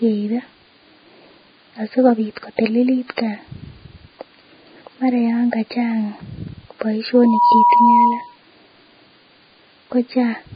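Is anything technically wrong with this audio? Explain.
Yes, there are two faults. Throughout, the speech sounds grainy and hissy, with smeared consonant onsets and nothing above 4.9 kHz. This is likely Vorbis compression at a very low quality setting, consistent with a bitrate near 16 kbps. The encoder discards the top band and quantises the remaining detail into noise. A spectrogram shows a flat ceiling at 4.9 kHz and blotchy, speckled energy below it.

From 7.14 to 8.36 s there is a loudspeaker feedback squeal. The microphone picks up its own loudspeaker output, and because the loop gain at 966 Hz exceeds one, that tone grows by itself. The tone swells over roughly a third of a second to about 5 dB above the speech, appearing on a spectrogram as a single bright horizontal line.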